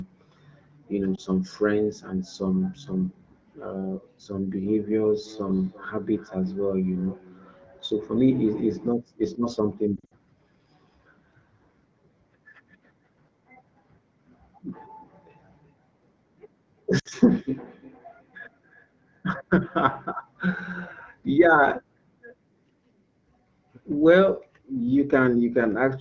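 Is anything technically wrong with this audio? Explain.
Yes, there are two faults in this wideband call audio.

Lost AMR speech frames occur at 1.16 s (one 20 ms frame), 9.96 to 10.13 s (120 ms lost across 160 ms, longest run 60 ms), and 16.99 to 17.08 s (60 ms). Frames failed their checksum, so the decoder kept reusing the last good pitch and vocal tract settings at falling gain. The result is a brief warble or smeared, fading stretch, not the hard silent gap of a plain dropout.

Feedback echo between two devices runs from 4.48 to 9.05 s, peaking at about -21 dB, and from 14.86 to 20.17 s, at about -24 dB. A second device in the room replays the call, and the microphone picks it up again. The sound returns as distinct, thinner repeats about a third of a second apart, not the smooth decay of room reverberation.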